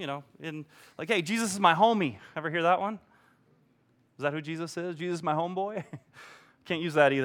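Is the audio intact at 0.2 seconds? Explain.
Yes, the audio is intact at 0.2 seconds, with no audible fault at that moment.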